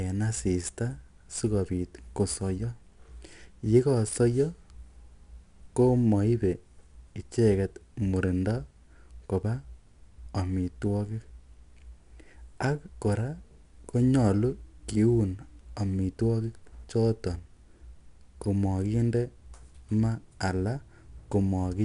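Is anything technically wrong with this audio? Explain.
Yes. Throughout the speech there is plainly audible 4-bit ADPCM compression. Each sample is coded as a coarse step from a prediction, so the error tracks the signal level. It is heard as gritty hiss on loud syllables and roughened attacks. Nothing sits above 10.6 kHz, which dulls the top end and fits a low-rate stream of about 89 kbps. A spectrogram shows broadband noise filling beneath loud passages and a hard ceiling at 10.6 kHz.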